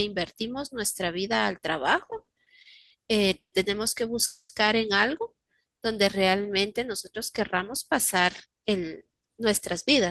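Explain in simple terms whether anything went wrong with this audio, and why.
Repeated stalls (stutter) appear from 2.05 to 2.92 s. The speech catches seven times in under a second, with the longest hold about 90 ms and roughly a quarter of that stretch filled in. The data arrived late and unevenly, so the receiver's small waiting store of audio kept running dry. Each time, it stretched the last sound until more came. Nothing is lost, but the speech jerks and drags.

Two call audio freezes follow, at 3.38 to 3.54 s and at 4.26 to 4.51 s. In each, the sound hangs on its last bit, then goes silent: about 110 ms of silence in the first and 50 ms in the second. After that the speech picks up exactly where it stopped. The likely cause is that the data was held up on its way, so the receiver had nothing to play. That inserts gaps of 140 ms and 230 ms without losing anything.

A jitter buffer slow-down runs from 5.62 to 6.63 s. 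Here the speech plays at about 88% speed while keeping its normal pitch, so sounds are drawn out, and about 130 ms is added in total. The receiver was low on stored audio, so it repeated tiny slices of the voice, one vocal vibration at a time, to build a reserve.

A jitter buffer speed-up runs from 8.45 to 9.46 s, the opposite case. The receiver had more audio waiting than it wanted, so it snipped out tiny slices of the voice, about a tenth of a second in all. The speech runs at about 111% speed with unchanged pitch and sounds hurried.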